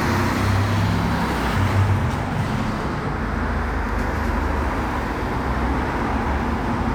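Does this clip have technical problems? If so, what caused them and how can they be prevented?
Yes. Between 0.58 s and 6.1 s there is a regular tick or small pop roughly every 1.1 s, about seven in all, heard while the everyday sound is playing. These are clock drift buffer slips. The likely cause is two devices running on separate clocks that disagree by around 150 ppm, so the buffer between them slowly drifts until a handful of samples, on the order of seven, is dropped or repeated. On a spectrogram each slip appears as a thin vertical broadband line at evenly spaced intervals. On a zoomed waveform it shows as a sudden step or kink where the signal jumps. Prevention: lock both devices to a shared word clock, or use adaptive sample-rate conversion between them.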